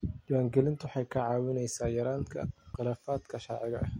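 A speech recording with one loud pop at 2.74 to 2.77 s, a single sharp transient peaking roughly 5 dB above the speech, which continues unbroken beneath it. The cause is likely an electrical pulse, such as a connector being disturbed, a switch, or static discharge, entering the signal chain.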